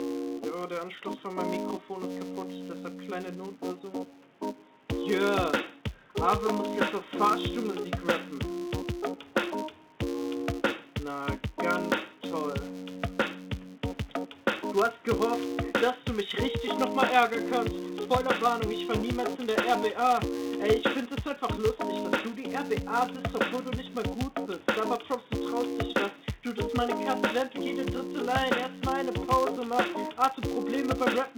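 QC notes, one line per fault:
Throughout, filter restarted on every block: a steady buzz near 188 Hz sits under the audio, rising and falling with the signal's level, so louder passages carry a harsher rasp and quiet stretches let it fade. The filter loses its memory at each block boundary and restarts from silence, so every block opens with a small transient. Those clicks repeat at the block rate, which fits 256-sample blocks at 48 kHz.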